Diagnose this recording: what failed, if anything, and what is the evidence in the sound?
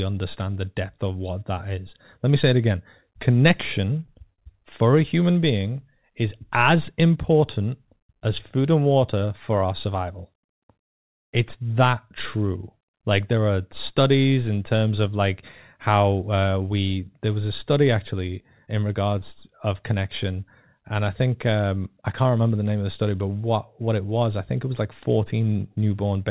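The network and jitter buffer failed, twice, with a short stall from a late packet. At 4.06 s a sound is held about 16 ms too long. From 4.34 to 4.40 s it is held for 44 ms. A packet arrived late, so the buffer ran empty. The receiver stretched the last sound, then resumed at the same point. Nothing is lost. The delay simply grows, and the held sound buzzes or dips slightly.

At 18.66 to 18.69 s there is a short concealed packet loss, also at the network stage. About 20 ms of speech never reached the decoder in time. The receiver covered the hole with about 10 ms of extrapolated sound, built from the preceding pitch or noise, and then blended back in. The result is a brief smear or wobble. A short consonant there may vanish. The G.711 mu-law path itself cuts everything above 4 kHz.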